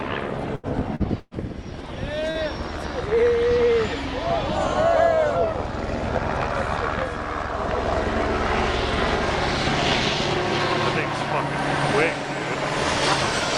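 The trouble here is all in the first two and a half seconds, and it's network loss being papered over by the receiver. There are two bursts of packet loss, at 0.55 to 0.66 s and 1.2 to 1.34 s. Roughly 80 ms and then 120 ms of audio simply never arrived, so the decoder stretches the last sound into a fading buzz or hiss. The second one even drops to silence for about 20 ms before the audio picks up further along. There are also two short concealed packet losses, at 0.95 to 1.03 s and 2.31 to 2.38 s, each about 40 ms. Those come across as quick smears or wobbles where the gap got patched over and blended back in.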